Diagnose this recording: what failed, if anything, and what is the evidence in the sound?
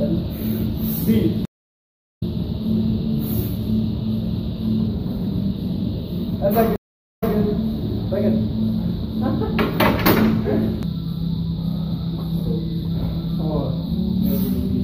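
The network stream dropped twice and the player reconnected each time, a stream reconnect that restarts the decoder mid-stream. From 1.45 to 2.23 s the audio goes silent for about 0.74 s, then resumes roughly half a second further on, so material is skipped. From 6.76 to 7.35 s a 0.43 s gap is followed by audio that picks up 0.16 s earlier, repeating a short stretch as the server resends its buffer. Each restart opens with a brief muted or faded-in onset.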